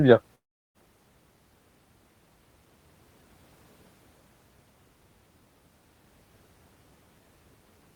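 At 0.35–0.77 s the speech becomes a fading buzz, then silence, likely a long network dropout. Unlike a brief glitch, about 400 ms is lost.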